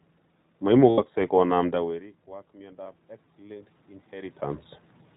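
Throughout, the sound carries the narrowband, slightly rough and synthetic character of the iLBC codec, and the damage is plainly audible. On a spectrogram, all energy stops at a hard ceiling near 4 kHz with nothing above it. Harmonics look smeared and grainy where the excitation has been coarsely coded, in a pattern that fits the 15.2 kbps mode with 20 ms frames. The room noise beneath the signal is thinned and coloured by the same coding.

From 0.90 to 1.00 s there are lost iLBC frames. About 80 ms went missing, which fits four consecutive 20 ms frames. The decoder filled the gap by repeating the last pitch period mixed with noise, so it sounds like a briefly held, buzzy vowel. On a spectrogram this appears as flat, unchanging horizontal harmonic bands. Normal detail returns almost immediately afterward.

From 1.54 to 4.44 s the automatic gain rises. The level at the microphone had dropped by about 24 dB as the talker moved away around 1.5 s. 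The gain control responded slowly, lifting its gain by about 5 dB over nearly three seconds, so voice and background swell together. The waveform envelope and the noise floor between phrases climb gradually in step, with no abrupt jump.

From 2.84 to 2.86 s another lost iLBC frame, about 20 ms long, produces a very short buzzy smear. On a spectrogram it shows as a thin vertical strip of frozen harmonics, and clean coding resumes right after it.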